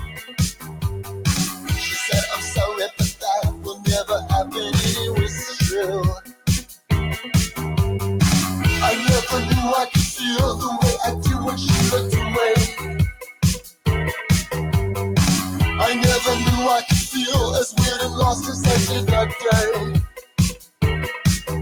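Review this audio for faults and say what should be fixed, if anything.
A speech noise suppressor applied to music or sounds runs throughout. It treats steady tones and tails as noise, so level swings by around 10 dB.

The noise suppressor cuts sound at 0.0–1.72 s, 2.33–4.74 s, 5.28–5.61 s, 6.15–6.91 s, 12.68–13.87 s, 20.07–20.82 s and 21.16–21.5 s. Held sound sinks, by up to about 19 dB.

Disable speech noise suppression for this source, or switch it to a music mode.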